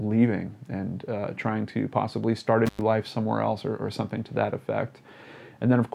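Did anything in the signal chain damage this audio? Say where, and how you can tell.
Yes. Intermittent contact in the analogue wiring: from 2.66 to 2.81 s the signal drops out for about 100 ms with crackle at the edges, as a loose connector briefly opens.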